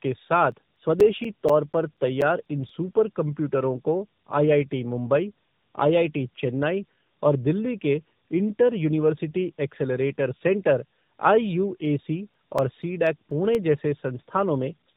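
Rough, muffled, warbly speech with nothing above 3.8 kHz runs throughout. This is tandem speech coding: the sound fits two AMR-NB coders in a row, with a G.711 link between them, each recoding the last one's losses.

From 0.52 to 3.18 s, a regular tick comes about four or five times per second, of uneven strength. The longest dropouts are around 10 ms. These are CD scratch ticks, where a blemish beat the disc's error correction on each turn and the player patched the gap.

A second run of CD scratch ticks, shorter and with dropouts of around 5 ms at most, comes from 11.86 to 13.79 s.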